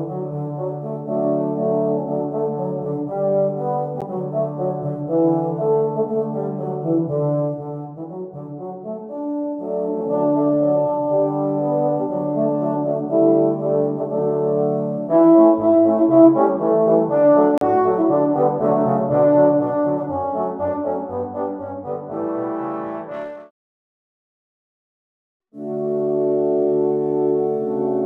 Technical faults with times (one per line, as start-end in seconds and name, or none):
4.01 block of digital silence
17.58-17.61 block of digital silence